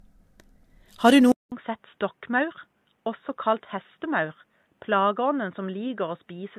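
From the very start, the speech has a swirly, smeared, hollow character, and nothing gets through above 14 kHz. That points to generation loss, most likely from the audio being encoded around four times over, which fits a 64 kbit/s AAC-LC chain. Each re-encode quantises on a shifted frame grid, so the noise and spectral holes stack up. The result sounds worse than a single pass at that rate would, and consonant attacks come out blurred.

At 1.32 s there's a gap of about 200 ms. After it, the sound drops roughly 10 dB in level and turns dull and boxy, with nothing above 3.8 kHz, right through to the end. The likely cause is the input switched to a poorer device, such as a headset's call profile taking over from a better microphone. A new, faint background noise comes in with it, sitting well below the speech.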